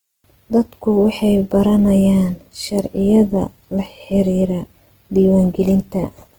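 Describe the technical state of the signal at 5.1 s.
At 5.1 s the speech is carrying Opus compression, and it runs through the whole clip rather than just this moment. The likely cause is a low-rate encode in Opus's music (CELT) mode, which fits roughly 16 kbps. With so few bits, the encoder keeps each band's energy but refills the detail with folded or noise-like content. The damage is plainly audible: the speech sounds rough and grainy, though the band still reaches about 20.2 kHz.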